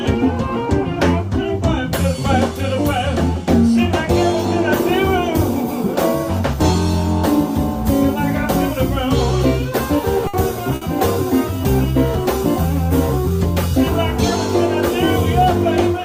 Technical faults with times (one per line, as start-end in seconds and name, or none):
10.27-10.36 burst of packet loss
10.75-10.84 burst of packet loss